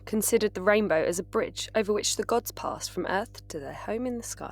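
A steady low drone sits under the speech from start to finish, pitched at 50 Hz with a few low harmonics stacked above it. It sits roughly 20 dB below the speech. This is mains hum: the 50 Hz power line has leaked into the signal path, most likely through a ground loop between connected equipment or from a transformer close to the cabling.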